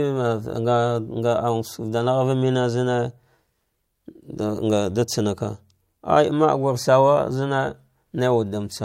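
No technical faults can be heard anywhere in this recording.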